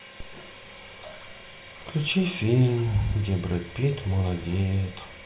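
No technical faults are audible.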